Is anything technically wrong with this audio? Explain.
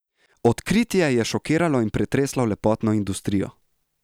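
No, nothing in this speech recording stood out as technically wrong on listening.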